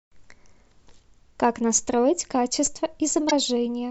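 At 0.67–0.71 s and 3.28–3.33 s, damaged data in the compressed stream makes the decoder lose sync briefly. Each spot gives a short glitch.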